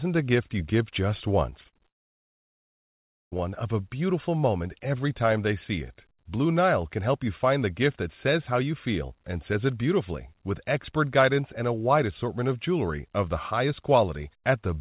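From 1.5 to 1.88 s the speech breaks up with repeated packet loss (robotic sound). Five short holes, the longest about 39 ms, are each patched by stretching the preceding sound, so roughly a fifth of that span is filler. It comes across as choppy. On a spectrogram the harmonics smear into flat, repeated slices between brief gaps; the waveform shows small copied segments and notches instead of natural syllable shapes.

At 1.88 s the audio stops and stays gone until 3.34 s, which is most likely a long network dropout. A brief fading continuation of the last sound gives way to about 1.4 s of silence, and the speech resumes without the missing part. On the waveform this is a flat line after a short decaying tail. The spectrogram shows an empty band across all frequencies, bounded at the top by the 4 kHz ceiling of the call path, consistent with 64 kbps G.711 A-law.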